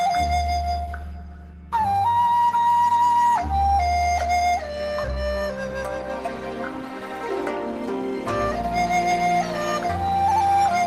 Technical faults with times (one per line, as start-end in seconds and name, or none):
none